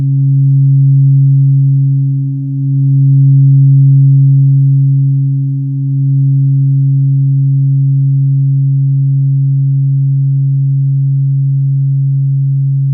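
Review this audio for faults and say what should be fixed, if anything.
Nothing in this audio needs to be fixed.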